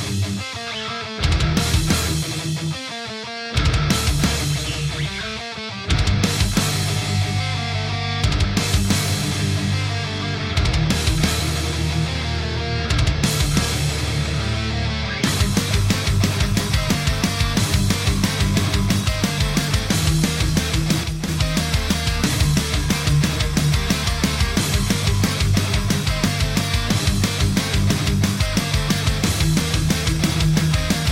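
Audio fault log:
21.04–21.28 s, one channel drops out: the level falls abruptly by about 6 dB for roughly a quarter second, then recovers. This likely comes from one stereo channel briefly going silent, so the mono sum loses half of the shared material.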